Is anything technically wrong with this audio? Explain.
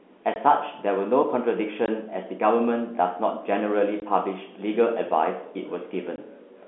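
Yes. Packet loss filled with silence at 0.34, 1.86, 4.00 and 6.16 s: a single 20 ms packet drops out each time, leaving hard-edged gaps in the telephone-band speech.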